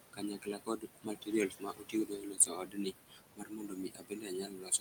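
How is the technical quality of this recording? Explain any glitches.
Heavy noise suppression degrades the recording. It colours the whole clip and also cuts into the speech.

Noise suppressor artifacts, throughout: the suppressor pulls bands it judges to be steady noise down by about 20 dB, frame by frame. The room noise, about 8 dB below the speech, sinks between the words and rises under them.

Speech cut by the noise suppressor, 0.13–1.33 s and 1.49 s to the end: the suppressor mistakes parts of the voice for noise and drops them by about 19–20 dB. Roughly 0.7 s of the first stretch is affected, leaving sounds swallowed and faint.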